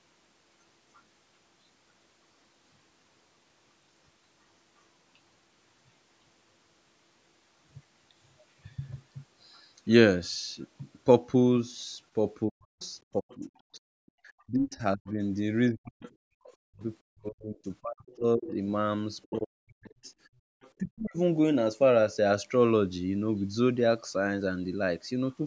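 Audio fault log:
12.48 to 21.17 s, speech suppressed in double talk: The talker's level sinks in patches, falling by as much as about 40 dB at its deepest, for around four seconds in total across this stretch. The sound dips, thins and breaks into pieces rather than fading smoothly. This is likely the echo canceller reacting to both sides talking at once. Unable to separate the near talker from the loudspeaker echo, it pulled everything down together.
12.8 to 14.11 s, 16.02 to 16.1 s and 18.09 to 20.7 s, other side's voice leaking through: A second, fainter voice sits underneath, roughly 25 to 30 dB below the main speech. It appears as a brief scrap near 16.1 s and as longer stretches in the other two spans. The likely cause is loudspeaker sound reaching the microphone and surviving the echo canceller incompletely.
14.12 to 14.18 s and 20.33 to 20.51 s, background gated by the echo canceller: The room sound suddenly drops away by about 40 dB, briefly in the first instance and for about a fifth of a second in the second. 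It then snaps back. Each drop falls right at the end of, or inside, a leakage stretch. The canceller clamped the microphone hard while the loudspeaker was active, then released it.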